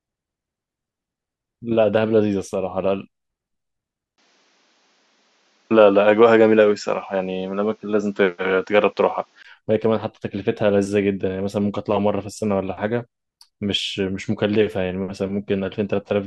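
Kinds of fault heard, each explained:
Input switched to a poorer device: from 4.16 to 9.45 s the speech abruptly loses everything above 7.5 kHz and turns duller, after a brief 20 ms gap at the switch, then opens up again at the end. The likely cause is the recording moving mid-stream to a lesser microphone or a headset call profile with a narrower band, its own tone, a level shift of roughly 5 dB and a faint new noise floor sitting well beneath the speech.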